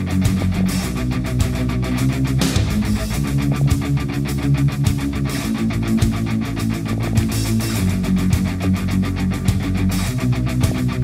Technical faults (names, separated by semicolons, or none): DAB burbling